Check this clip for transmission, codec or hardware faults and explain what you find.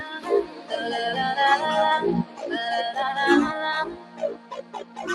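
A speech-oriented noise suppressor is processing material it was not designed for, and at three points it cuts specific sounds harder still.

Noise suppressor applied to music or sounds, throughout: the suppressor treats sustained tones, ambience and decaying tails as background noise and attenuates them, while onsets pass largely intact. Its gain swings by around 15 dB as it decides what counts as noise. The result is a pumping, fluttering level and a thinned body, with held sound sinking after each attack.

Sound cut by the noise suppressor, at 0.0–0.72 s, 2.24–2.5 s and 3.9–5.0 s: in these spans the suppressor classed the sound as noise and pulled it down further than its surroundings, by as much as about 11 dB. Roughly half a second is affected in the first span, about a third of a second in the second, and about a second in the last. Steady and fading material drops away or has its decay truncated, while abrupt transients still come through.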